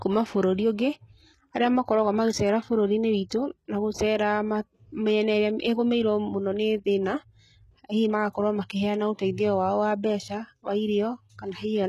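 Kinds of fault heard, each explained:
HE-AAC compression: s sounds turn heavily gritty and metallic, nothing above 12.3 kHz, likely treble rebuilt by spectral band replication from lower bands at a very low bitrate.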